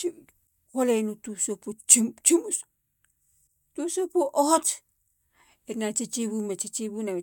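No technical fault can be heard anywhere in this speech recording, and the signal stays intact and continuous throughout.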